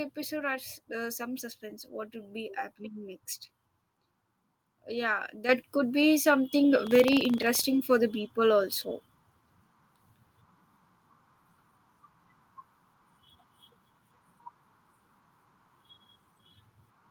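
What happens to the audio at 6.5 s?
At 6.51 s the microphone volume is stepped up: the call software raises the device's input gain in a single jump of about 4 dB. Speech and background noise get louder together and instantly, unlike a gradual automatic-gain ramp or a speaker moving closer.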